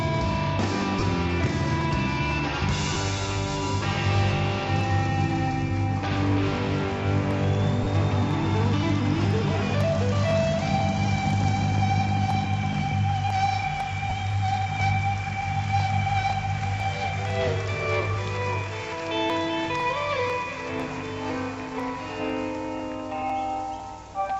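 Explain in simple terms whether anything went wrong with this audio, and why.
Lost LE Audio frames at 1.00 to 1.03 s, 2.93 to 2.96 s, 7.84 to 7.87 s and 14.10 s. Each time, a few Bluetooth packets failed to arrive, and the receiver filled the gap by reusing the last bit of sound with its details scrambled. The result is a brief noisy smear lasting 15 to 30 ms. The light compression is barely audible.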